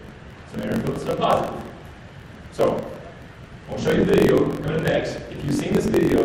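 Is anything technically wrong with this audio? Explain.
Yes. A block size mismatch (truncated) runs throughout: one stage writes longer blocks than the next reads, which fits 1024-sample blocks, so each block's tail is dropped. This produces a buzz at about 45.9 Hz, and the audio plays 1.07 times fast at roughly normal pitch.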